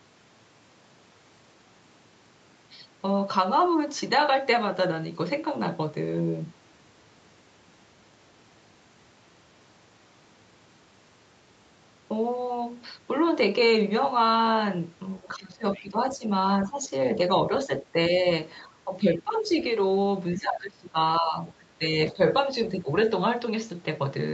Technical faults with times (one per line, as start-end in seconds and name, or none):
15.20-16.26 speech suppressed in double talk
15.73-15.80 other side's voice leaking through
16.67-16.91 speech suppressed in double talk
17.67-18.15 speech suppressed in double talk
18.64-19.55 speech suppressed in double talk
20.37-22.19 speech suppressed in double talk
22.79-22.87 speech suppressed in double talk